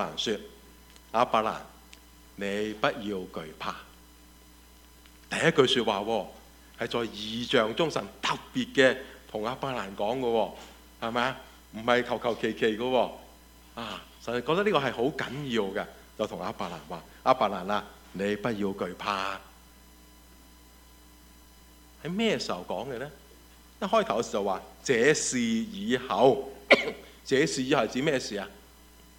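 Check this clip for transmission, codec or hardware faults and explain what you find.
Nothing wrong can be heard anywhere in this recording.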